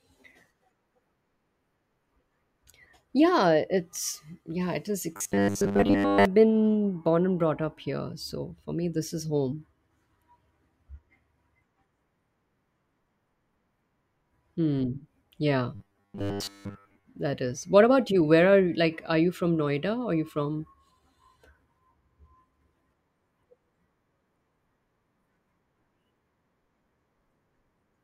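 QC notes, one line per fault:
5.16–6.25 s and 15.75–17.04 s, robotic sound from repeated short buffers: in both spans the speech collapses into a rigid, metallic buzz fixed at 100 Hz that still loosely tracks the syllables. The first sits between "it's yeah it is" and "been born and brought." This is likely a 10 ms chunk replayed while fresh audio runs late, with most of the real signal skipped. The steady 100 Hz pitch sets it apart from ordinary dropout or codec warble.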